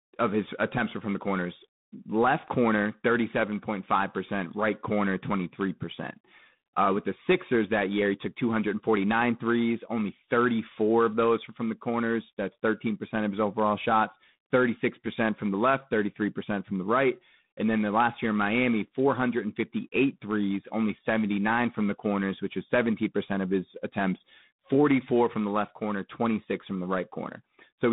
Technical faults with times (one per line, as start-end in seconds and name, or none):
0.00-27.92 G.726 ADPCM